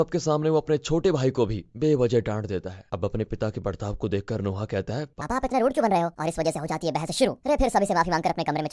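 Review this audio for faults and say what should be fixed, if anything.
From 5.21 s to the end at 8.73 s there's a wrong sample rate problem: the speech suddenly runs 1.5 times too fast and jumps up about 7 semitones, which fits 16 kHz audio being played out at 24 kHz with no conversion. Make sure the playback path resamples to the device rate, or is told the audio's true rate.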